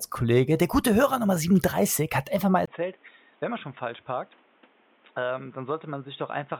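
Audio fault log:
2.66 s to the end: input switched to a poorer device. After a brief gap of about 20 ms, the speech suddenly goes dull and boxy, with nothing left above 3.8 kHz. It also drops by around 10 dB and picks up new, fairly quiet background noise underneath, roughly 30 dB below the speech. That combination of a sudden narrower band, level shift and different background points to the recording likely jumping to another microphone or a headset's call mode partway through.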